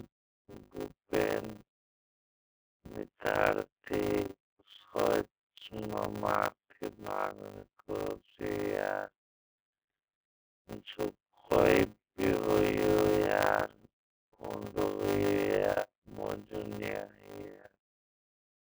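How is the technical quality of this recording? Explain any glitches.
The technical quality is poor, with two faults running through the whole recording.

The first is the iLBC codec. A narrowband VoIP coder codes each frame's excitation independently, in a way that fits its 30 ms, 13.33 kbps mode. The speech is confined to roughly 250 Hz to 3.4 kHz, with nothing above 4 kHz. The damage is plainly audible as a rough, synthetic edge on the speech.

The second is a block size mismatch (padded). One stage writes blocks, apparently 256 samples long, into a stage that reads larger ones, and the shortfall is filled with zeros. The resulting gaps produce a steady 100 Hz buzz, and the speech runs at 0.533 times normal speed while keeping roughly its normal timbre.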